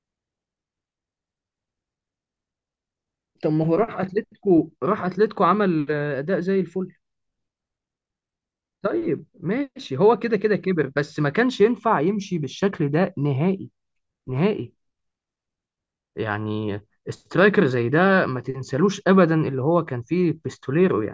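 No audible technical faults anywhere in this speech recording.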